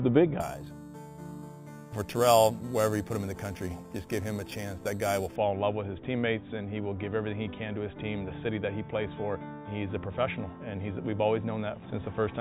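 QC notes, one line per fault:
0.41 to 5.36 s, imaging from sample-and-hold upsampling: a bright, metallic fizz sits over the sound, rising and falling with its level, with the lowest band between 4 kHz and 8 kHz at about 16 dB below the signal and moving against the pitch. Each sample was simply repeated to raise the rate, with no smoothing filter, so mirrored copies of the spectrum were left above the original band. This fits an 8 kHz source stepped up to 48 kHz.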